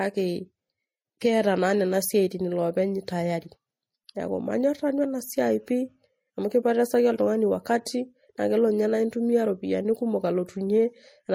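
Throughout the speech, the sound carries two layers of coding damage at once, each codec's artefacts heard on top of the other's. Nothing is present above 16.6 kHz. This is likely transcoding between lossy codecs, with an MP3 stage around 64 kbit/s followed by a Vorbis stage near 40 kbit/s. The second encoder wasted its small budget re-coding the first one's artefacts and then added its own, so both sets are heard together.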